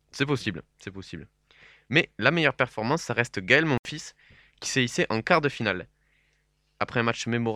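Speech, where audio packets likely failed to reach the headphones in time, a Bluetooth dropout: from 3.78 to 3.85 s the sound cuts out for about 75 ms, consistent with roughly four lost packets, then resumes as if it had played on through the gap.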